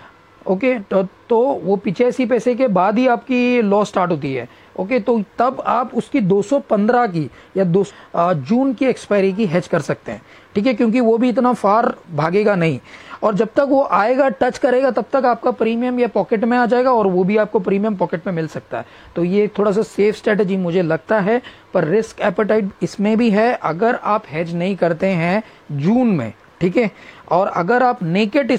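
At 7.85–7.91 s the sound jumps ahead with a blip, likely a stream segment skipped, showing as an abrupt waveform break and vertical spectrogram seam.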